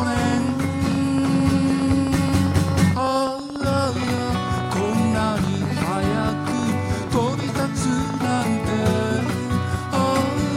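A train of clicks runs from 0.02 s to 8.42 s: around a hundred near-identical pulses, roughly ten per second but unevenly spaced, standing about 5 dB above the audio and audible in quieter gaps too. Their matching shape and steady density set them apart from random crackle or isolated dropouts, and they stop well before the end. The likely cause is interference from nearby equipment or a faulty connection or power supply.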